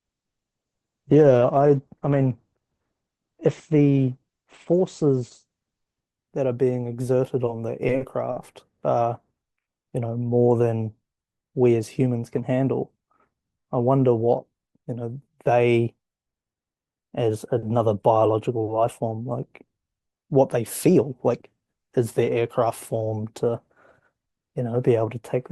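From 0.0 to 6.0 s the speech sounds dull and smeared, with thin treble and stronger codec artefacts. This is an adaptive stream starting at a low bitrate, consistent with about 12 kbit/s Opus. At 6.0 s quality jumps, without a gap, to a version consistent with about 64 kbit/s.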